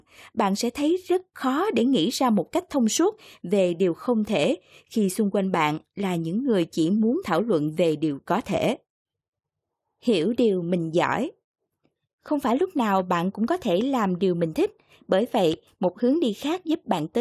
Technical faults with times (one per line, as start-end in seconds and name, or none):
none